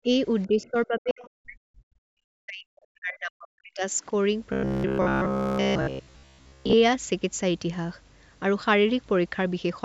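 Speech suppressed in double talk appears first at 0.03 to 0.09 s as a shallow dip of about 5 dB, then from 0.47 to 3.93 s as a deep one, falling as far as about 40 dB across roughly three seconds. With both ends talking at once, the echo canceller likely couldn't tell the near talker from loudspeaker echo, so it pulled everything down.

The other side's voice leaking through shows up as faint scraps at 0.42 to 0.47 s and 0.63 to 0.70 s, about 35 dB below the speech, and a stronger patch at 1.10 to 1.28 s, about 20 dB down. These are likely residual echo the canceller failed to remove.

Robotic sound from repeated short buffers runs from 4.53 to 6.74 s. Roughly 70 percent of the audio there is repeated filler, and the repeats impose a rigid 66.7 Hz buzz, which points to a loop of about 15 ms standing in for late audio.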